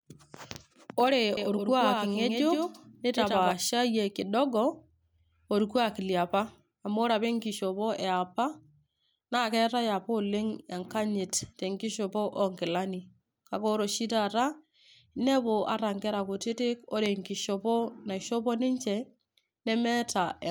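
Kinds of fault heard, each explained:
Doubled audio track: a clean, dry copy trails about 150 ms behind, roughly 5 dB quieter, cutting in and out abruptly, likely from a slower duplicate capture path.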